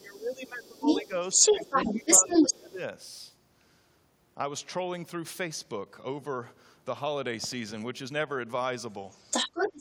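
A speech recording where an echo canceller likely struggled with both sides talking at once, so speech is suppressed in double talk: the voice drops by roughly 15 to 20 dB from 0 to 0.87 s, at 1.03 to 1.14 s and from 1.72 to 2.79 s. The same canceller likely left residual loudspeaker sound in the microphone, so the other side's voice leaks through from 0.05 to 2.71 s and again from 9.09 s to the end.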